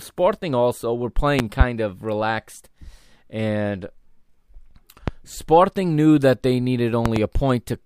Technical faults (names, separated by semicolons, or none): loud pop